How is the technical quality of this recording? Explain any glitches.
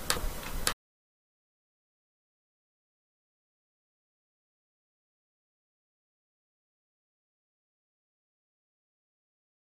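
Listening through the recording, nothing stood out as a technical problem, and there are no glitches to explain.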